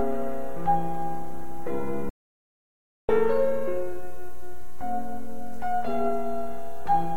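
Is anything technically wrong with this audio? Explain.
Yes, there's a digital broadcast dropout in the music from 2.09 to 3.09 s. The receiver stopped getting usable frames and muted, so the sound fades out in about 3 ms and stays silent for nearly a second. Whatever played during that gap is just gone.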